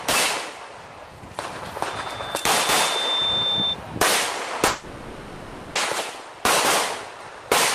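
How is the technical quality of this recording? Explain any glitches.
One clear glitch affects the recording, between 4.67 and 5.78 s, where the sound breaks down for a little over a second.

This is likely a long network dropout: the stream stopped delivering audio for about 1.1 s, and the receiver had nothing real to play. It papered over the entire gap by extending the last sound it had, so for about 1.08 s you hear a synthetic buzz or hiss rather than the actual signal, with no silent stretch. When audio resumes at 5.78 s, it picks up further along, and that portion of the original sound is lost.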